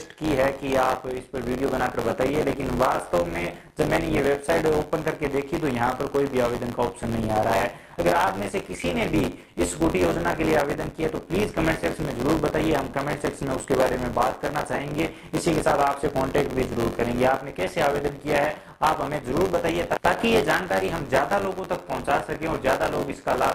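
From the first moment to the last, the sender's audio clock runs about two percent slower than the receiver's, which is clock drift between sender and receiver. Audio arrives more slowly than it is played out, so the jitter buffer keeps draining and the receiver has to fill in by repeating short pieces of sound. The result is a run of small timing hiccups spread unevenly through the whole clip rather than one clean glitch.

Also present throughout is buffer tearing. The write and read positions in the playback ring buffer have slipped so that they cross inside each period, leaving a small slice of every buffer filled with audio from about 20 ms earlier, with a hard join at each edge. The repeating seam produces a robotic buzz near 93.8 Hz, which fits a 512-sample buffer. It is heard only while sound is playing and disappears in the silences.

From 0.23 s to 23.38 s the receiver makes repeated timing corrections to stay in step with the slow sender, playing the material at an effective 98% speed. 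Every edit lengthens the audio, adding about half a second in total by the end. The repeats are small and unevenly spaced, so they come across as faint stutters and a tempo that drags slightly and unsteadily. The call codec's high-frequency cut-off at 12 kHz is also audible as a loss of the highest treble.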